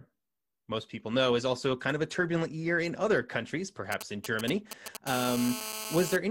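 GSM signalling bursts run from 3.92 to 4.97 s, just after "year in other countries". They come from a 2G phone close to the recording chain sending short groups of radio bursts, as it does while setting up a call or message. The audio circuitry rectifies that radio energy into the signal, producing a galloping dit-dit-dit of brief buzzes at the 217 Hz burst rate, sitting roughly 10 dB below the speech.

GSM phone buzz follows from 5.07 to 6.16 s. The phone is now transmitting continuously, as during a call, pulsing 217 times a second. Each radio pulse is rectified by the audio electronics, so the bursts become a hard, raspy 217 Hz buzz dense with harmonics. It runs steadily under the speech, about 8 dB below it, and bears no relation to what is being said.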